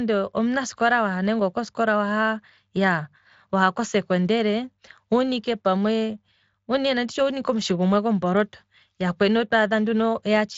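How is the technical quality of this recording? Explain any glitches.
No glitches or technical faults can be heard here.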